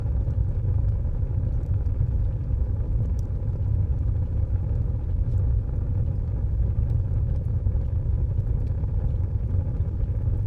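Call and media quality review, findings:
No technical faults were found in the everyday-sound recording; level, timing and continuity hold steady across the whole capture.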